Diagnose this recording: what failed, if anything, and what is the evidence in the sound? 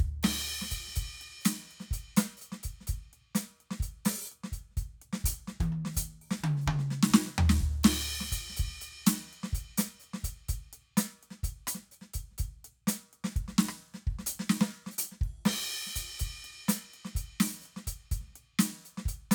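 Nothing in the chain audibly failed: the music reaches the listener intact, with steady level, continuous timing and no audible disturbance at any stage from capture to playback.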